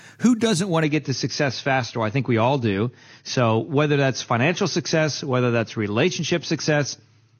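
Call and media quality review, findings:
Adaptive stream at a lower bitrate: speech turns dull and smeared at 0.84 s, right after "doesn't want", and stays degraded to the end. Nothing above 6.6 kHz, with added codec artefacts. The sound fits the player stepping down from about 96 to 32 kbit/s AAC when throughput fell. Unlike packet loss or a dropout, there is no gap or glitch, just one abrupt, sustained quality step.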